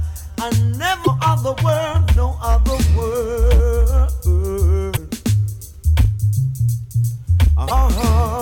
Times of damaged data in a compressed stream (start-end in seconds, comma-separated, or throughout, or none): 1.01-1.08, 4.93-4.98, 7.64-7.71